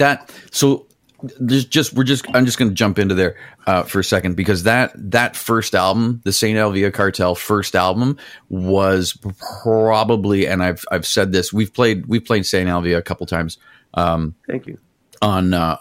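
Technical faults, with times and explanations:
No technical faults detected anywhere in the speech recording.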